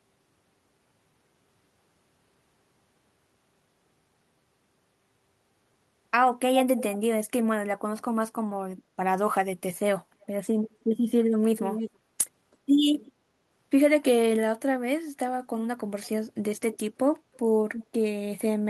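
An echo leak, likely a loudspeaker's echo canceller passing its microphone pickup back into the call, returns the speech about 0.32 s late as scraps at 6.77–6.83, 10.23–10.27, 11.57–11.9, 12.52–12.57, 13.05–13.11, 16.03–16.09, 17.34–17.38 and 17.72–17.86 s. The loudest, at 11.57 and 17.72 s, sit about 10 dB below the speech, the one at 6.77 s about 15 dB below, and the rest are faint.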